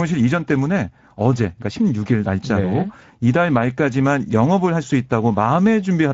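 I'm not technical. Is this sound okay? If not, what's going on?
No. The speech has Speex codec damage from start to end. This old voice-chat squeezing leaves it sounding hoarse and noisy.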